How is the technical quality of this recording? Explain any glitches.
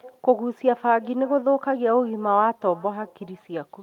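The recording is marred by one fault that runs the whole length of the speech: echo with no canceller. The far end's loudspeaker output reaches its microphone unremoved, so each phrase returns roughly 0.4 s later, about 26 dB down, and thin. On a spectrogram, every syllable gets a faint duplicate trailing it; the waveform shows low ghost bursts after each louder one.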